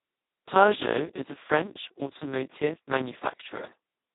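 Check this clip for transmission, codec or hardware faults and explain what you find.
The clip has one codec fault running from start to finish.

Throughout, Speex codec damage is heavy: the sound is hoarse, buzzy and close to robotic, which points to a very low setting of around 2 kbps that starves the excitation. On a spectrogram, harmonics smear into noisy bands and everything above 3.8 kHz is empty.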